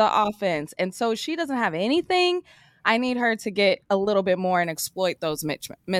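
From 4.64 s to the end, the speech shows pre-emphasis left on. The treble boost applied for transmission, following the 75-microsecond FM curve, was never undone by the matching de-emphasis, so energy at 10 kHz sits about 14 dB above 1 kHz. The voice turns thin, glassy and hissy, with sharpened sibilants. On a spectrogram the upper bands brighten abruptly at 4.64 s, and the waveform shows spikier, more jagged detail.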